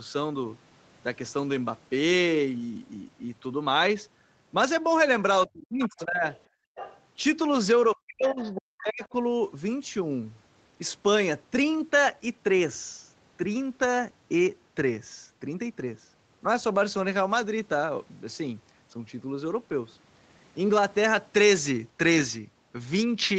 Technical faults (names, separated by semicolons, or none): speech suppressed in double talk; other side's voice leaking through; background gated by the echo canceller; lost packet rebuilt from error correction